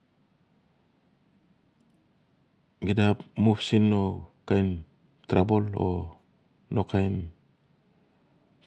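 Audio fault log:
No technical faults are audible anywhere in this speech recording, and the signal holds steady and intact throughout.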